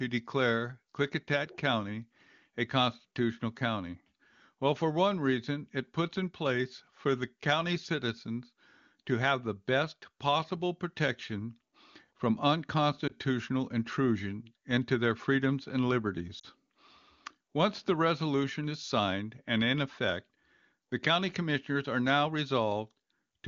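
Lost AMR speech frames occur at 13.07 s, just before "intrusion into their freedoms", and at 16.39 s, after "into their freedoms and". The first gap sounds like one lost 20 ms frame, a brief dip or warble. The second sounds like two frames, about 40 ms, where the wideband decoder reused stale settings with falling gain, sinking toward near silence.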